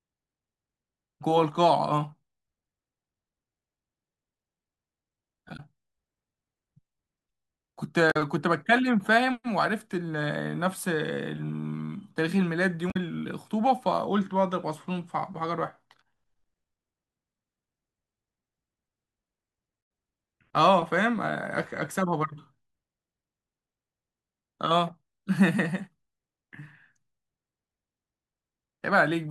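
Speech with damaged data in a compressed stream: brief disruptions at 5.53–5.60, 8.08–8.17, 12.88–12.97 and 19.79–19.81 s, where the decoder loses frame sync.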